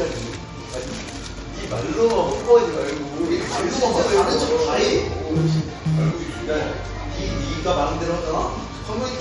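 MP3 compression damage runs throughout, from start to finish. Nothing is left above about 11.1 kHz, so the top octave is simply missing. The remaining sound has a watery, swirling quality, and sharp attacks are smeared. The likely cause is an MP3 encoder starved of bits, consistent with a low bitrate around 48 kbps. Short of data, it removes the treble above a fixed cut-off and drops weak frequency components that then switch on and off between frames, producing the swirl.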